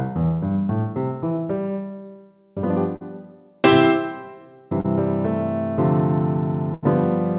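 Audio carried over a narrowband call path, with nothing above 4 kHz, which fits G.711 mu-law at 64 kbps, shows short concealed packet loss at 2.96 to 3.02 s and 4.80 to 4.86 s. Each time about 40 ms never arrived and the receiver extended the preceding sound before blending back, giving a brief smear or wobble rather than an audible hole. A burst of packet loss at 6.74 to 6.84 s is different: about 80 ms went missing, so the continued sound fades into a held buzz or hiss and resumes with a skipped section.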